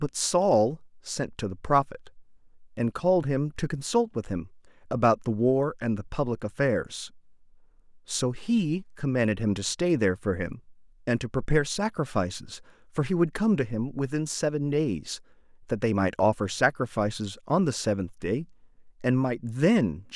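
No technical faults are audible.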